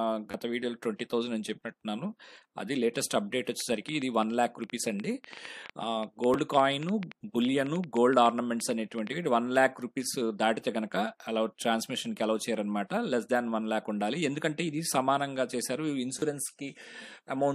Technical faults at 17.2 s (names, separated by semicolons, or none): none